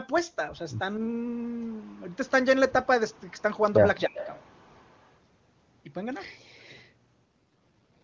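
From 4.06 to 4.15 s the speech drops by roughly 40 dB for about a tenth of a second, likely speech suppressed in double talk as the echo canceller ducked its own talker along with the loudspeaker echo. Starting at 4.14 s a delayed copy trails the voice by 276 ms, an echo leak likely from incomplete cancellation: about 15 dB down, until 4.47 s, then a much fainter return, about 40 dB down, from 4.78 to 5.05 s.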